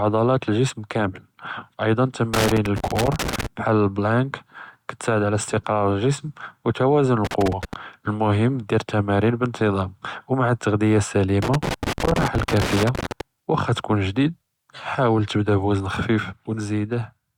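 A speech recording with two separate problems. First, there's loose connector crackle in three bursts: 2.34 to 3.46 s, 7.25 to 7.74 s, and a longer one from 11.42 to 13.21 s. Each burst is an irregular scratchy crackle, the kind you get when a worn or dirty contact shifts and keeps breaking and restoring the signal path, so the audio is chopped in quick, uneven bits. Then at 16.20 s the level drops by about 4 dB and stays down to the end of the clip, with the background noise falling right along with the speech. That's a sudden gain jump, most likely a digital gain setting applied from one sample to the next with no ramp, so the whole signal steps down at once instead of easing down.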